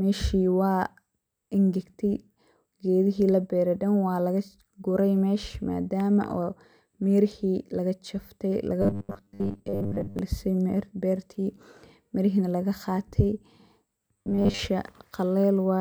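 A speech clip in which audio likely arrived too seldom, so playback filled the gaps by looping a short buffer of about 10 ms while most of the real signal was skipped. The result is robotic sound from repeated short buffers, from 8.82 to 10.19 s and again from 14.13 to 14.59 s. The voice becomes a rigid, metallic buzz locked at 100 Hz that only loosely tracks the speech.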